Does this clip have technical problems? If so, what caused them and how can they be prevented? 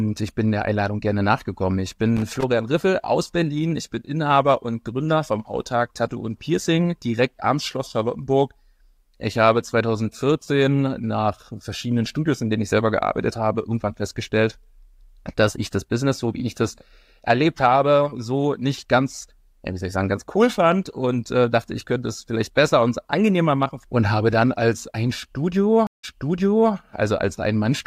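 Yes, there are two faults.

From 2.17 to 2.43 s there is loose connector crackle: an irregular burst of scratching lasting about a quarter of a second. A worn or dirty contact in the signal path was intermittently making and breaking as it moved, chopping the speech into fragments. Any DC present on the line turned each break into a pop. Cleaning or replacing the connector and securing the cable against movement prevents this.

From 25.87 to 26.73 s there is a stream reconnect. The connection dropped and the audio went silent for 164 ms. When the player reconnected and started a new decoder, playback resumed about 0.7 s earlier than where it stopped, because the server resent a burst of already-played audio. As a result, a short stretch of speech is heard twice. A larger client buffer and a more stable network connection prevent this.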